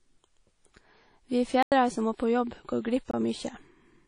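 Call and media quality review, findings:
WMA compression, whole clip: speech rings and smears, with hiss pumping along with the level. Likely cause is a low-rate transform codec, consistent with about 32 kbps. Coarse quantisation spreads noise across long blocks. Spectrogram: hard ceiling at 10.1 kHz, patchy missing bins below.

Block of digital silence, 1.63–1.72 s: abrupt 93 ms hole. Likely output buffer not filled in time, pointing to a 4096-sample block. Waveform: flat near-silent line, sharp cut-in and cut-out. Spectrogram: full-band blank column.

Block of digital silence, 3.11–3.14 s: 23 ms dropout heard as a short hole. Likely same underrun mechanism, fits a 1024-sample block. Waveform shows a narrow near-silent segment. Spectrogram shows a thin vertical gap.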